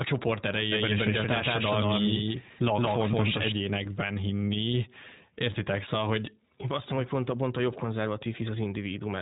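Throughout, the speech passes through the iLBC codec: nothing above 3.8 kHz survives, and each 20 ms frame is coded on its own, giving a plainly rough, synthetic edge. That fits its 15.2 kbps mode rather than a smoother narrowband codec. From 0.72 to 3.52 s a doubled audio track appears. A second, equally loud copy trails by roughly 150 ms, with no decay or room colour, and it starts and stops abruptly, which sets it apart from echo or reverb. A second capture path or a misaligned edit is the likely cause.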